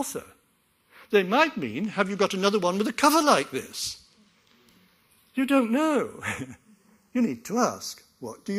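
Throughout the clip the two channels are running on separate clocks, so they suffer from channels drifting apart: one side runs fast against the other by a few tens of parts per million, and the delay between them grows steadily, reaching only a fraction of a millisecond by the end. Folded to mono, that creeping offset pushes comb-filter notches slowly through the spectrum, so the sound takes on a gradual, sweeping flanging.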